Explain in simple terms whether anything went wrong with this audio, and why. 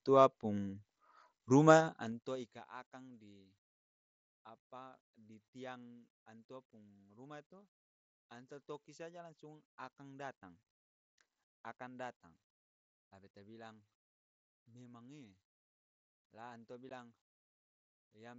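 Two things went wrong. First, zipper noise between about 1.77 and 2.72 seconds. While the volume was being turned well down, the system lowered it in a series of small jumps, about fifteen a second, instead of sliding it down smoothly. Each jump puts a tiny click into the sound, so during that second the fade has a fast ticking or zipping texture riding on top of the speech.

Second, unconcealed Bluetooth headset packet loss at 16.89 seconds. The wireless link between the headset and the phone dropped a couple of its very short speech packets, about 15 milliseconds' worth, and nothing was done to cover the gap. The receiving end filled the hole with silence or an idle pattern, so the speech briefly cuts out with hard edges, which can sound like a small click. The headset's usual wideband speech coding is still audible around it.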